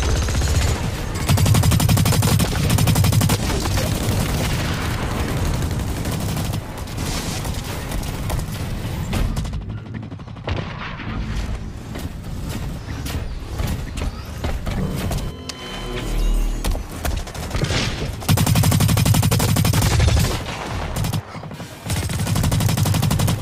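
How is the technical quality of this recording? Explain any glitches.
Not great: compressed frames are skipped at 1.14, 2.63, 6.97, 11.96, 14.49 and 22.11 s. Each jump drops whole 23.2 ms frames, roughly 70 ms to half a second of sound.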